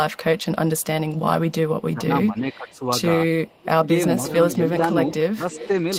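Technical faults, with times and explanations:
0.13–1.51 s, 2.38–2.78 s, 3.47–3.58 s, 4.51–4.55 s and 5.09–5.67 s: echo leak. A delayed copy of the speech trails it by about 350 ms, faint at first and much louder near the end. This is likely a loudspeaker echo the far-end canceller missed. It is a distinct repeat, not a smeared reverberant tail.
1.9–2.84 s, 3.57–3.82 s and 5.34–5.69 s: speech suppressed in double talk. The talker's level dips sharply, deepest around 3.6 s, while the other side speaks. This is likely the canceller ducking both signals. The speech is pushed down rather than dropped into silent gaps as packet loss would leave.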